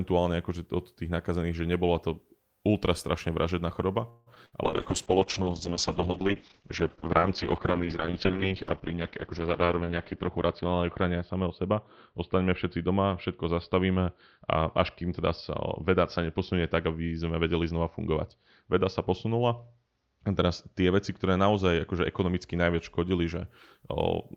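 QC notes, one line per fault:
4.09–4.28 s, call audio freeze: right after "ultra strašne vražedná choroba" the last sound is stretched into a fading buzz or hiss for about 170 ms. The likely cause is delayed packets draining the jitter buffer. Playback then resumes where it stopped, so nothing is lost and the delay grows by 170 ms.
4.34 s, short concealed packet loss: about 20 ms of audio never reached the decoder. The receiver extended the preceding sound briefly and blended back into the real signal, leaving a small smear or wobble.
4.46–4.54 s, burst of packet loss: roughly 60 ms of consecutive audio is missing. The receiver continued the last sound at falling level as a held buzz or fading hiss, then jumped ahead, so the material in between is gone.
4.65–23.53 s, call bitrate drop: the encoder rate falls from 32 kbps to 7 kbps and stays at the bottom for about 5.7 s. The audio band narrows from 20 kHz to 6 kHz, so the sound turns muffled and rough from coarser coding.
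9.03–9.99 s, jitter buffer speed-up: playback runs about 10% fast at unchanged pitch. The receiver trimmed short pitch-period slices repeatedly, about a tenth of a second in total, to reduce excess buffered delay, and the passage sounds hurried.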